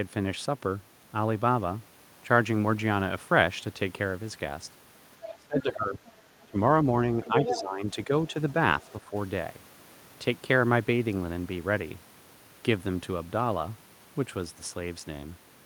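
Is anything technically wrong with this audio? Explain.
Yes. Two echo-cancellation faults appear in the middle of this speech clip.

The other side's voice leaks through at 5.27–5.37 s, 6.06–6.12 s and 7.25–7.61 s, at roughly 15, 30 and 5 dB below the talker. The likely cause is loudspeaker playback reaching the microphone that the echo canceller only partly removed, leaving brief fragments of a second voice.

Speech is suppressed in double talk at 5.37–6.03 s, 6.46–6.57 s, 7.27–8.1 s, 8.31–8.36 s and 9.0–9.14 s. The talker dips by up to about 20 dB, most deeply in the first stretch. This is likely the canceller turning down everything while both sides spoke at once.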